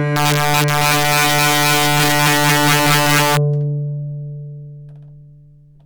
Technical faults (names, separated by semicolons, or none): integer overflow